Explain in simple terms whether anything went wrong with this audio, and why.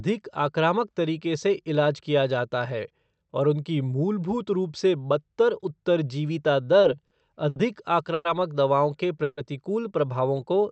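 Three short stalls from a late packet occur in this speech, at 6.81 s (just after "रूप से बदतर उत्तरजीविता"), 7.07 s and 7.49 s. Each time the next chunk of audio arrived late, so the receiver held the last sound for about 20, 40 and then 70 ms. Nothing is lost, but the sound briefly drags.

Two longer call audio freezes follow, from 8.14 to 8.27 s, just before "दवाओं के", and from 9.23 to 9.39 s, right after "दवाओं के". The audio stops moving and a fading buzz fills roughly 110 and 140 ms. It then resumes where it left off, likely because the audio data was held up in transit.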